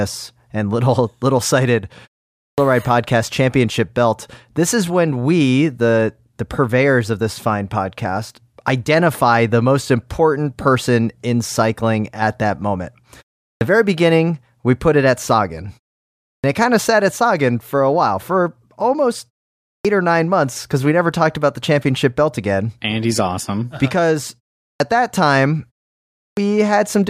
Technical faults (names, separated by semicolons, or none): clipped start after a pause